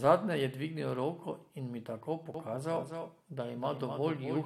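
At 2.34 s, right after "roko in mi tako", a doubled audio track begins and continues to the end of the clip. A second, full-band copy of the speech trails the original by roughly a third of a second, about 5 dB quieter, with no decay or room colouring, so it reads as a distinct slapback rather than reverb. It switches in abruptly. The likely cause is the same signal being captured twice, once through a slower path.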